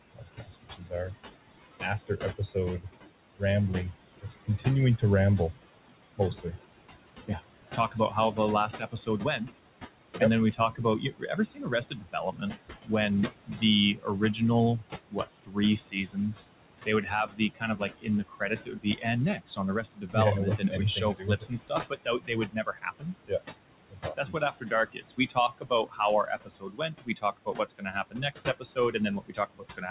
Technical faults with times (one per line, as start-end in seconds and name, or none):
0.00-29.91 noise suppressor artifacts
0.15-1.15 speech cut by the noise suppressor
1.81-3.42 speech cut by the noise suppressor
4.15-5.03 speech cut by the noise suppressor
6.17-6.58 speech cut by the noise suppressor
7.27-9.57 speech cut by the noise suppressor
10.20-16.33 speech cut by the noise suppressor
16.86-29.91 speech cut by the noise suppressor